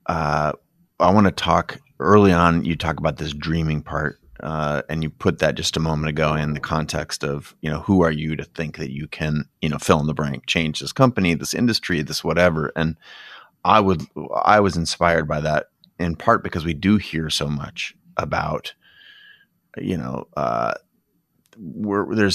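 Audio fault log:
No faults are audible anywhere in this speech recording. There is nothing to log for any point in the clip.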